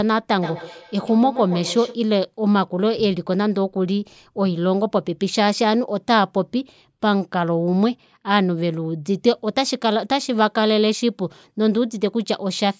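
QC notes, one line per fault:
0.33–2.06 s, feedback echo between two devices: the speech returns roughly every 150 ms, each copy thinner and more ringing, peaking about 12 dB below the direct sound. A second device in the room replays the call and its microphone re-captures it, beyond the reach of either echo canceller. Spectrogram shows the same formant patterns stacked at regular offsets; waveform shows a decaying train of repeats.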